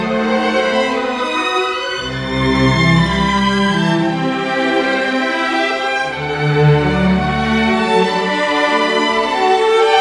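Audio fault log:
No faults found anywhere in the clip.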